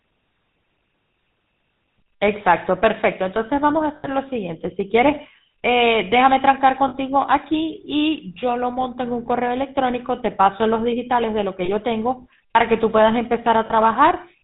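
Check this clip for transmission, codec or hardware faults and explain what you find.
The speech carries two related faults: GSM full-rate codec coloring throughout and four short dropouts where lost GSM frames were concealed.

GSM full-rate codec, the whole clip: The coder models the vocal tract as a filter and drives it with a sparse, regularly spaced pulse train built from only every third excitation sample, at a rate that fits 13 kbps. Nothing above 4 kHz gets through. The damage is plainly audible as a buzzy, gravelly roughness with a dull top. A plain 4 kHz low-pass would sound muffled but smooth. The grit here is what marks it as this codec.

Lost GSM frames at 3.96 to 4.07 s (80 ms), 6.88 to 6.95 s (60 ms), 11.64 to 11.71 s (40 ms) and 13.66 to 13.73 s (40 ms): When frames fail to arrive, the decoder reuses the last good frame's parameters at a falling level. Each gap is bridged by a brief rough, metallic ring rather than cutting to silence. 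A clean dropout or a click would have an abrupt edge. This smeared, held tone is the concealment at work, and it is longest at 3.96 s.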